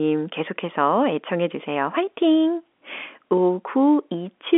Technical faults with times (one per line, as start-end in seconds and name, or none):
none